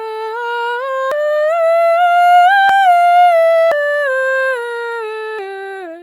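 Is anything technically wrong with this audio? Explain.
Yes, the music jumps forward abruptly at 1.12, 2.69, 3.72 and 5.39 seconds. Each is a sudden skip with no gap, losing about a fifth of a second at 1.12 and 3.72 and about a tenth at the others. That's likely a dropped buffer (overrun): the program fell behind, the hardware overwrote the unread audio, and the two sides were spliced together.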